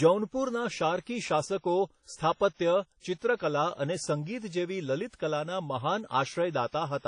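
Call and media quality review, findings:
Throughout speech: ringing, washy smear, hiss breathing with the signal, nothing above 10.1 kHz. Likely WMA compression, long-block quantisation fitting a 32 kbps stream, unlike steady background noise.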